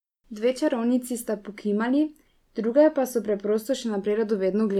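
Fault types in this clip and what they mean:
No faults detected in this speech recording; nothing to flag.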